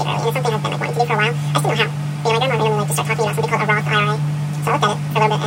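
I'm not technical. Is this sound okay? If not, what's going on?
No. The whole clip plays at twice its proper speed and a full octave too high, a fault called audio read two samples at a time (double speed). The player treated pairs of samples as single steps, so everything rushes by.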